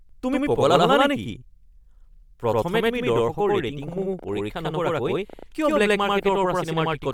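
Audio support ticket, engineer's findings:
Channel delay (doubling), throughout: one channel late by about 93 ms, fits a 4096-sample buffer; summed to mono, speech heard twice as a same-level slap echo.

Breathy, grainy edge on speech throughout, likely Bluetooth LC3 compression: upper band thinned and noise-filled at a rate suggesting around 48 kbps, 10 ms frames.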